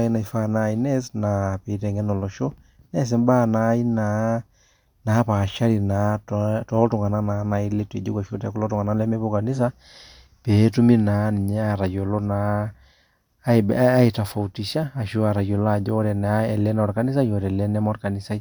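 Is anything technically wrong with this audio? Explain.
No, nothing is technically wrong with this audio.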